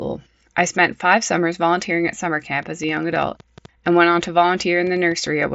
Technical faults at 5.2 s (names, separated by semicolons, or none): train of clicks